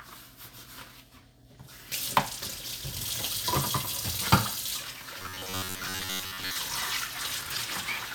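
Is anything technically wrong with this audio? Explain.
Yes. From 5.19 to 6.56 s there is robotic sound from repeated short buffers. The audio turns into a rigid, metallic buzz at about 94 Hz that loosely tracks the underlying sound. This is likely because new audio arrived too slowly, so playback kept looping a slice of roughly 10.7 ms, with most of that stretch made of repeats instead of fresh material. A waveform shows identical cycles tiling end to end, and a spectrogram shows evenly spaced harmonic stripes at 94 Hz intervals.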